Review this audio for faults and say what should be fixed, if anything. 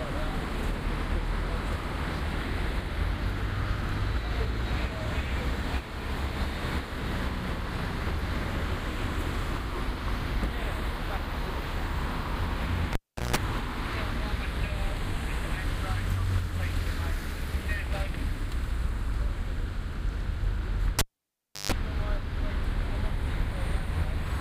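A live cable was pulled and plugged in twice. At 12.93 to 13.36 s, a pop drops into about 380 ms of near silence, then 160 ms of 60 Hz mains buzz as the plug tip touches. At 20.99 to 21.72 s, the gap lasts about 680 ms, with 140 ms of 50 Hz buzz before the second pop. Mute the channel or secure the connectors before anyone handles cables during recording.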